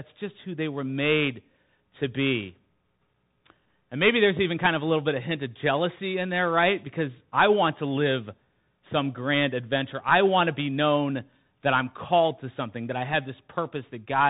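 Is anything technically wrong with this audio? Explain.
Yes. Plainly audible Bluetooth CVSD headset codec damage runs throughout the clip. Each sample is a single up-or-down bit at 64 kHz, with an adaptive step size, which fits a 64 kbps stream. Nothing passes above 3.8 kHz. Fast high-frequency energy outruns the step, so s sounds turn scratchy and a granular hiss sits under the speech.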